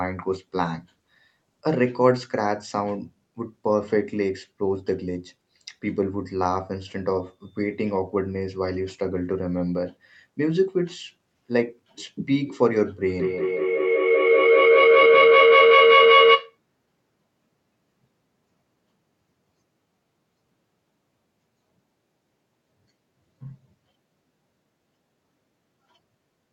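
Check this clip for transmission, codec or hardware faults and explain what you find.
One fault stands out: a feedback howl from 13.09 to 16.59 s. A microphone and loudspeaker on the same call keep regaining sound each round trip. A tone around 500 Hz swells to about 9 dB above the speech, with the loop repeating roughly every 200 ms.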